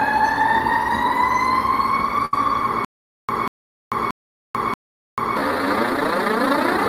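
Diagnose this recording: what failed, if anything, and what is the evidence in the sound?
Network stage: a burst of packet loss at 2.25 to 2.34 s. The receiver's concealment stretches the last sound for about 72 ms, fading it as the gap runs on. Playback then resumes further along, with roughly 60 ms of the sound skipped.

Playback stage: a stutter with silent gaps from 2.85 to 5.37 s. A 189 ms fragment repeats four times, each followed by 441 ms of digital silence, for a steady 630 ms cycle. This is likely a stalled stream retrying and replaying its last buffer, and the sound due in that span is lost.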